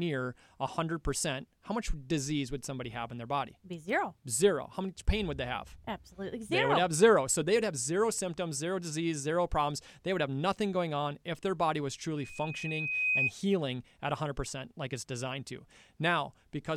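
Just after "if their body was", at 12.17 s, a loudspeaker feedback squeal begins. A single 2.5 kHz tone swells over about a second to sit roughly 5 dB above the speech. The microphone is hearing its own loudspeaker. The squeal stops at 13.32 s.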